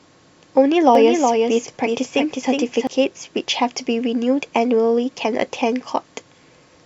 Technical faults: doubled audio track

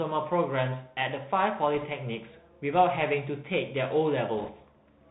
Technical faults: Bluetooth CVSD headset codec; bit errors on a Bluetooth voice link

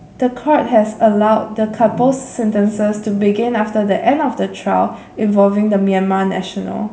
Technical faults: none

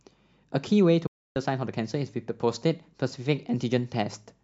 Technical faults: digital broadcast dropout

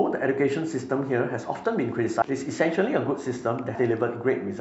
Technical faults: compressed frames skipped

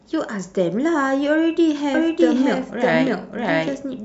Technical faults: doubled audio track

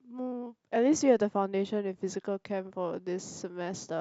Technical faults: none

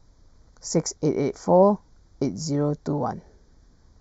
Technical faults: channel delay (comb filtering)

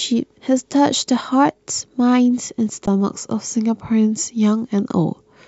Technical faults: underrun with held sample

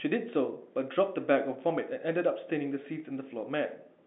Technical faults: none

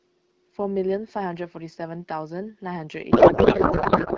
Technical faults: codec payload misread

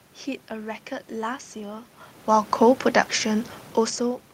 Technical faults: none

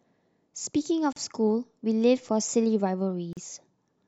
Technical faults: gap at a join of encoded pieces

